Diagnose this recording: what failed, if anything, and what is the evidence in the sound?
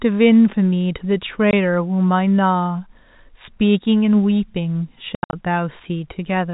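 The network dropped packets and the receiver substituted silence, which is packet loss filled with silence. A 20 ms hole opens at 1.51 to 1.53 s, then 160 ms of gaps scatter across 5.15 to 5.33 s, the longest lasting 80 ms. The hole sizes fit 10 ms packets.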